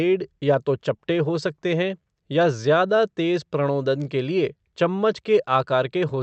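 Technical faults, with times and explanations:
Throughout: clock drift between sender and receiver. The sending side's audio clock runs slow, by roughly 4 percent, so packets arrive at a lower rate than the receiver plays them out. The jitter buffer keeps draining and cannot settle at a steady fill level, so the receiver has to keep stretching the audio to avoid running empty. The timing never locks, and the speech carries a faint, persistent unevenness from start to finish.
0.05 s to 6.16 s: repeated timing corrections. To keep the draining buffer from emptying, the receiver keeps inserting short repeated slivers of audio. All of them run the same way, lengthening the sound and never shortening it. Together they add roughly 0.3 seconds, so the speech plays at about 96 percent of its original pace. The insertions are small and unevenly spaced. The band limit near 8 kHz, which fits an Opus call codec, comes from the call path and is not part of this fault.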